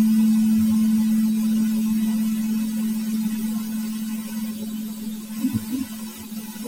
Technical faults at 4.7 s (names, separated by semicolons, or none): none